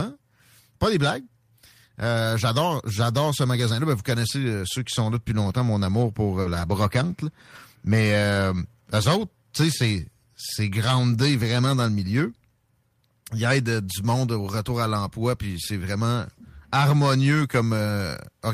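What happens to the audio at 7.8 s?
Nothing goes wrong at 7.8 s; the speech carries on intact through that moment, with no dropout, click, distortion or other fault.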